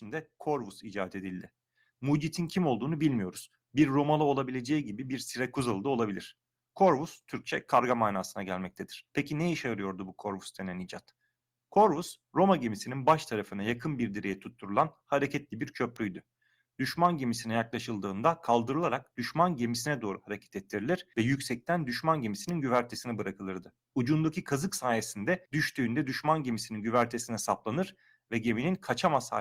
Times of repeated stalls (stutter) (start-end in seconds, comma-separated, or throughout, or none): none